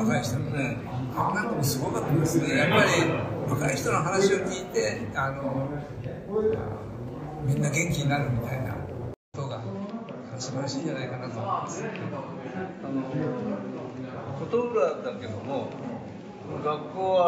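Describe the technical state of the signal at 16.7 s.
At 16.7 s the signal is still band-limited from a change at 9.14 s, most likely an input switched to a poorer device. A 200 ms gap marks the switch, and afterwards nothing reaches above 7.6 kHz, so the sound is duller. A spectrogram shows a flat ceiling there and a faint new noise floor, about 40 dB down, while waveform level stays roughly constant.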